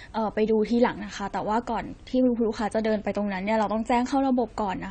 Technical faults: AAC compression

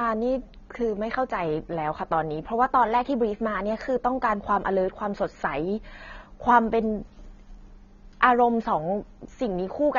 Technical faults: AAC compression

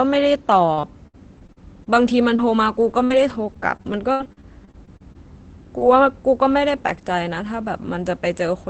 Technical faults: repeated packet loss (robotic sound); short concealed packet loss; lost packet rebuilt from error correction

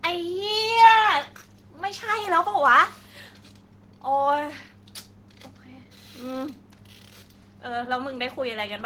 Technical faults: none

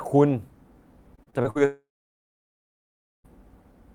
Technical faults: repeated packet loss (robotic sound); long network dropout

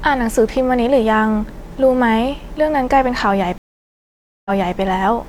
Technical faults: stream reconnect

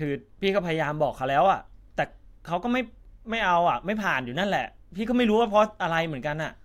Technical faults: none

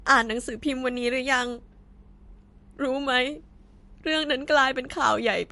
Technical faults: MP3 compression

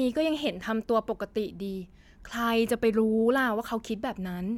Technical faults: none

